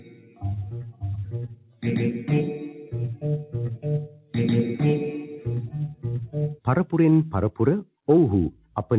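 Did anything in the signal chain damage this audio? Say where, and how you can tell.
Yes. The call processing stage damaged it: a noise suppressor applied to music or sounds stays on throughout. Sustained material and tails keep sinking by around 10 dB while onsets pass, so the level pumps. That is gain riding content, unlike a codec's fixed band limit at 4 kHz.

The clearest cases of sound cut by the noise suppressor are at 0.0–0.44, 0.65–1.03, 1.26–1.84, 4.07–4.34 and 8.51–8.76 s, where held or decaying sound drops by about 10 to 11 dB. Attacks survive and decays are clipped short, which tells it apart from dropouts, which silence everything.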